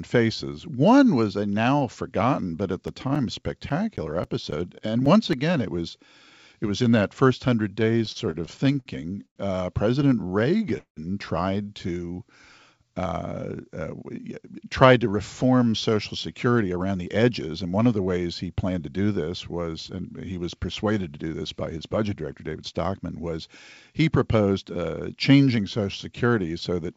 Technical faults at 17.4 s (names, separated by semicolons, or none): jitter buffer speed-up